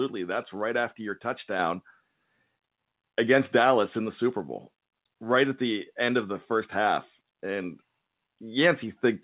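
A speech recording passes through a WebRTC call path, and nothing is heard above 4 kHz. That points to a narrowband codec such as G.711 mu-law. At 1.59 s the microphone volume steps up. The level jumps by about 5 dB at once. Voice and background noise rise together, so the change comes before any processing of the sound itself. The call software likely judged the input too quiet and raised the device's input volume in one step.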